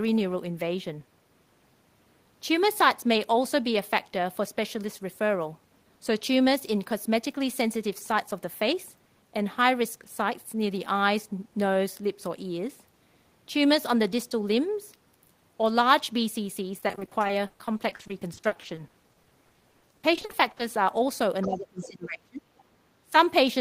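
From 16.79 to 20.61 s, repeated packet loss produces choppy, robotic speech. Dozens of gaps up to 80 ms are patched by stretching earlier sound, so about a third of that span is concealed. On a spectrogram this shows as smeared, repeated harmonic blocks.

At 21.42–21.46 s and 21.83–21.88 s, the other side's voice leaks through as faint scraps, about 15 and 20 dB below the talker. The likely cause is echo left over from a loudspeaker. These appear as weak, separate harmonic traces.

Between 21.46 and 22.45 s, speech is suppressed in double talk. The talker drops by up to about 25 dB, probably because the echo canceller turned everything down during overlap. A briefer dip of about 10 dB follows at 23.09–23.13 s. On the waveform both show as sudden hollowed-out envelope sections.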